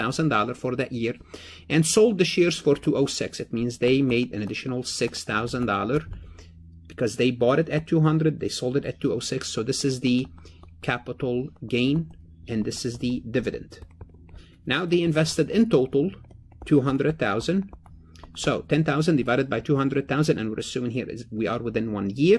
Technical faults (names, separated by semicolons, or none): none